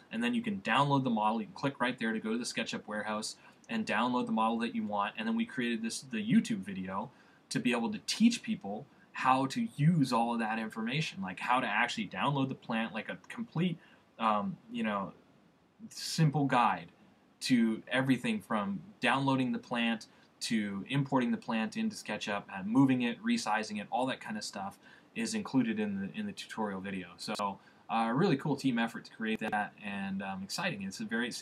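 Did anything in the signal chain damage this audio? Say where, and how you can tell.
Yes, chunks out of order at the buffer stage, 27.22–27.39 s and 29.36–29.53 s: a 43 ms chunk plays three chunks late, giving jumbled joins.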